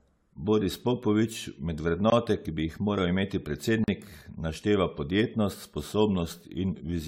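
Generation loss runs through the whole of this speech recording. It has a swirling, hollow, smeared character and soft, blurred consonant attacks, with nothing above 18 kHz, which points to AAC-LC at around 96 kbit/s. The damage is heavier than that bitrate alone would produce, and the likely cause is repeated decoding and re-encoding, around ten times. Each pass quantises on a shifted frame grid, so noise and spectral gaps pile up. Blocks of digital silence cut in at 2.10–2.12 s, a 20 ms hole, and at 3.84–3.88 s, a 40 ms hole. In each, the signal drops straight to silence and returns with no fade. The longer one sounds like a brief dropout. This is the pattern an output buffer leaves when it isn't filled in time.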